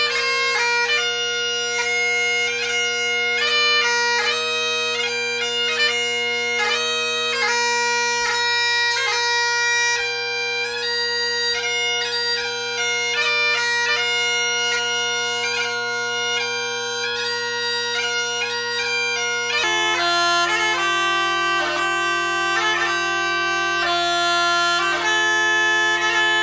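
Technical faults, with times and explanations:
19.64 to 26.42 s, wrong sample rate: sound slows to 0.73 speed and drops about 5.5 semitones, which fits 22 kHz material played at 16 kHz without conversion.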